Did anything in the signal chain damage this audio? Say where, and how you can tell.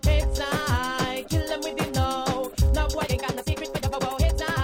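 Yes. From 2.92 s to the end, the sound turns abruptly rushed, running about 1.74 times faster with unchanged pitch. This is a time-stretched section, likely from software processing squeezing audio to fit a length by dropping short pieces while preserving pitch.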